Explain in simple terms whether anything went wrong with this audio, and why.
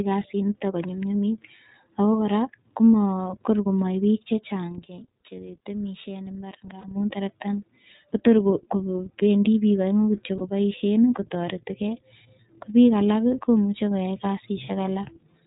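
The whole recording went through the iLBC codec, a phone-call voice codec that handles 30 ms chunks of sound one at a time and drops everything above 4 kHz. That is why the speech sounds muffled, slightly rough and synthetic. Unlike plain muffling, it also has a coded, artificial edge.

From 3.1 to 7.04 s, just after "konyumnyumit ako kora koma", there is a loudspeaker feedback squeal. A microphone picked up its own loudspeaker, and a single high tone near 5.6 kHz grew on its own over about a second and a half until it sat well above the speech. It is a steady, swelling howl, not a click or a burst of noise.

Lost iLBC frames occur at 6.80 to 6.85 s, just before "terektani kotor", and again at 10.37 to 10.42 s. In each case one 30 ms chunk went missing, and the decoder filled it by repeating the last bit of voice with some noise mixed in. Each one is a brief held, buzzy vowel rather than silence, and the speech comes back right away.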